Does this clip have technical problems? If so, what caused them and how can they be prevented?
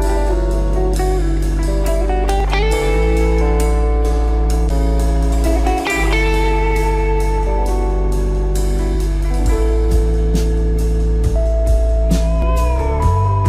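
Yes. Regular clicks recur about every 3.5 s from 2.40 s to 12.42 s, each appearing as a thin vertical line on a spectrogram. The likely cause is clock drift buffer slips, where two unsynchronised clocks force a small block of samples to be dropped or repeated. Locking both devices to one clock, or resampling between them, prevents this.

A brief glitch from 4.67 to 4.71 s, seen as a smeared broadband blotch with a small waveform jump, comes from damaged data in a compressed stream, where the decoder lost frame sync. Checksummed, reliable transfer of the file or stream prevents this.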